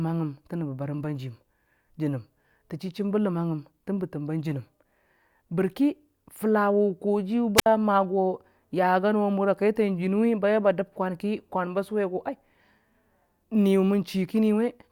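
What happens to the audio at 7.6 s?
At 7.56 to 7.66 s the speech suffers a wireless microphone squelch dropout. The analogue FM radio link fades, hiss rises briefly, then the receiver's squelch mutes the output for about 63 ms, leaving a near-silent hole before the speech resumes.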